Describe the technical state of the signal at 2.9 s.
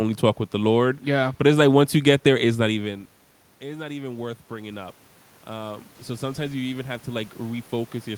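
At 2.9 s the signal is intact, with only the ordinary background noise of the room beneath the speech.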